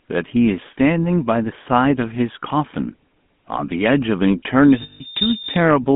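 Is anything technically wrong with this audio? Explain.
Yes, the speech carries three clear technical faults.

Throughout, the GSM full-rate codec gives a buzzy, gravelly roughness. Its pulse-driven vocal-tract model fits a 13 kbps coder, and the line keeps only 150 Hz to 3.5 kHz, so the spectrogram shows a hard band edge.

From 4.60 to 5.71 s, a loudspeaker feedback squeal builds at 3.6 kHz over about half a second. The mic–speaker loop gain exceeds one there, leaving a bright horizontal line about 10 dB above the speech.

From 4.82 to 5.02 s, lost GSM frames, about 180 ms' worth and consistent with nine frames, are concealed by repeating the last good frame. This gives a metallic ring and a smeared block on the spectrogram.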